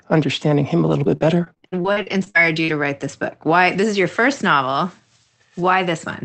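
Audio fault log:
0.89–2.70 s, repeated packet loss (robotic sound): a dozen dropouts up to 55 ms, each patched by repeating prior sound, giving robotic speech; waveform shows choppy, copied blocks.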